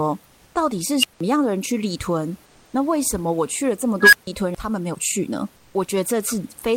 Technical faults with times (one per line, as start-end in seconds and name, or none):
0.26-0.54 comfort noise in place of the background
1.00-1.20 unstable filter
2.45-2.73 comfort noise in place of the background
4.01-4.27 unstable filter
5.56-5.74 comfort noise in place of the background